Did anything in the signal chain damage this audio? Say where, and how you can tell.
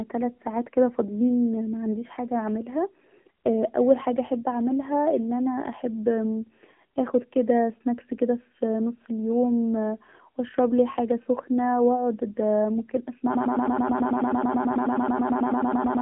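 Yes, at two stages. The whole clip went through the AMR narrowband mobile codec, at a low rate that fits the 7.4 kbps mode. Speech comes out buzzy and synthetic, the sound of a few pulses per subframe driving a vocal-tract model. On a spectrogram there is a hard ceiling at about 3.4 kHz with nothing above it, a sparse floor below 150 Hz, and smeared, blocky harmonics in the passband.

The second fault is a broken-record loop. From 13.35 s to the end of the clip, a 108 ms fragment repeats exactly and back to back, roughly 25 times, and whatever should have followed is lost. The likely cause is a playback or stream buffer that stalled and kept resending the last block it held. On a waveform the same short shape tiles identically. On a spectrogram it shows as a rigid comb of vertical stripes spaced about 0.11 s apart.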